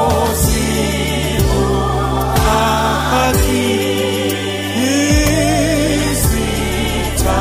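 No technical faults can be heard in the clip, so there is nothing to describe in time order.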